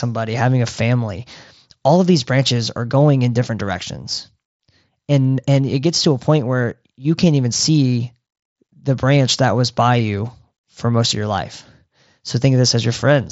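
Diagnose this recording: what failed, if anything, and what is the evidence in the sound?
Nothing failed; no faults are audible in this recording.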